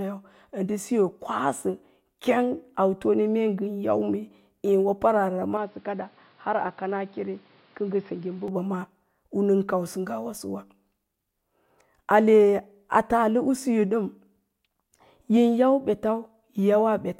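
Speech, with one fault. From 5.57 to 8.48 s the sound turns dull, nothing above 5.4 kHz, about 5 dB quieter, with new background noise. Likely an input switched to a poorer device.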